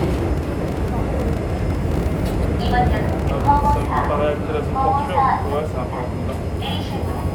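A sound recording with two faults. A train of clicks runs from 0.04 to 4.06 s. There are roughly fifty, at about 13.6 per second, unevenly spaced, peaking about 5 dB above the sound. Interference or a faulty connection is the likely cause. At 3.28 to 3.31 s the audio skips briefly. This is a broken MP3 bit reservoir, likely from dropped frames, lasting about one 26.1 ms frame.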